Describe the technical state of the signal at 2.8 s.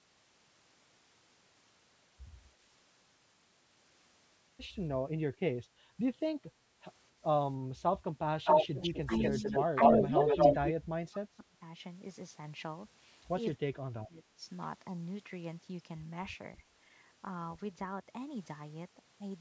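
At 2.8 s the speech is intact, with no dropout, distortion or other fault, only the normal call microphone processing that trims the lowest bass and leaves nothing above 8 kHz.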